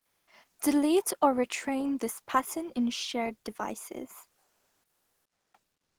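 Speech, with comfort noise in place of the background from 0 to 0.27 s and again from 4.43 to 5.51 s, right after "pattern in shared devices": the real room tone gives way to flat, featureless hiss, about 2 dB up at the start and about 3 dB down later. The likely cause is discontinuous transmission, probably Opus DTX, with the receiver synthesising noise while the sender goes quiet.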